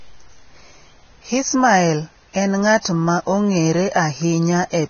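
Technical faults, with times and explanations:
Throughout: Vorbis compression, heavy, likely from low-bitrate encoding. Nothing in the speech sounds above 6.5 kHz, so sibilants lose their top edge and the sound feels dull and boxed-in. The treble that remains is hissy and grainy, with roughened tones and blurred consonant attacks, which fits a rate near 18 kbps. At that rate the encoder quantises the upper residue so coarsely that fine spectral detail is replaced by noise of similar energy.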